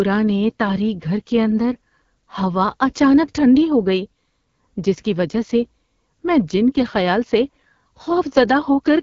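Throughout, the speech carries AMR wideband (HD Voice) codec damage. It sounds rough and raspy, which fits a low rate near 8.85 kbit/s. Nothing reaches above 7.4 kHz.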